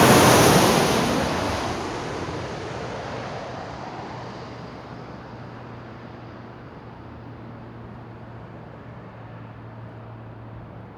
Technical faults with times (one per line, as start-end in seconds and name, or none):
none